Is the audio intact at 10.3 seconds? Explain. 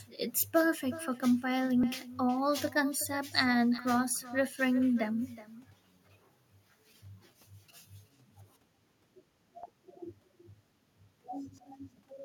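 No. At 10.3 s, as throughout the speech, there is echo with no canceller: the far end's loudspeaker feeds its microphone, and nothing removes the returning signal, so each phrase repeats roughly 0.4 s later at about 17 dB below the original, and thinner. On a waveform, every burst trails a smaller copy offset by that delay. A spectrogram shows faint, thinner ghost harmonics echoing each syllable's pattern just behind it.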